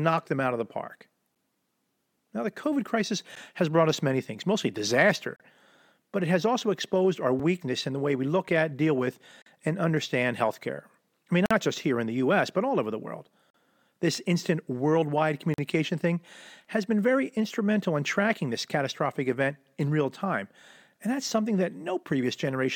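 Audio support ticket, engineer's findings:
Gap between stream segments: hard-edged silent holes at 1.35, 3.36, 5.36, 7.39, 9.42, 11.46, 13.50 and 15.54 s, roughly every 2 s, lasting 3 to 47 ms. Segment timestamps leave gaps and the player pads them with silence. Waveform shows flat dropouts; spectrogram shows thin blank vertical stripes.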